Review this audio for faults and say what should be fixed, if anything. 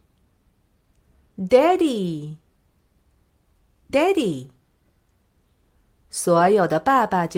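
No faults; nothing needs fixing.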